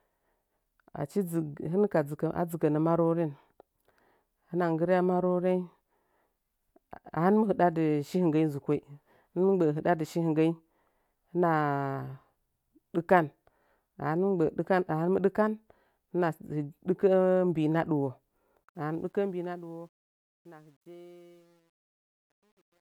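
From 18.64 s to the end, the fade-out carries truncation distortion. The gain stage keeps too few bits and adds no dither, which fits about a 10-bit path. The speech turns gritty, worst after 20.06 s. The waveform shows square steps, and the spectrogram shows broadband hash.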